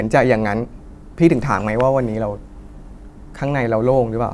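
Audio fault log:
No fault was found in this speech clip.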